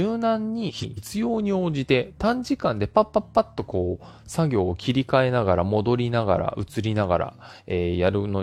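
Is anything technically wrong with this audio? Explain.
Yes. From 0.69 to 0.99 s the speech has frames out of order. Two adjacent blocks of 139.3 ms, which fits runs of three frames each, were decoded in swapped order. The stretch plays with its halves exchanged, a garbled flutter, and no time is lost.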